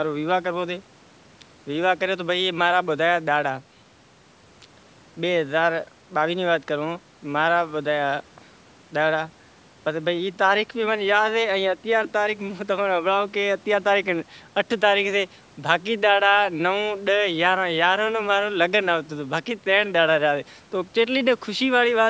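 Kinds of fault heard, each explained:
No faults are heard.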